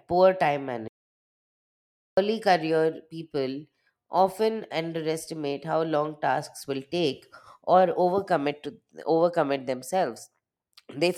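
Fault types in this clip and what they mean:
Audio dropout to silence: The speech cuts off after "poor time" at 0.88 s and returns at 2.17 s with "career people often underestimate". About 1.3 s is silent, without room tone. The input was likely lost, so the recording stored silence.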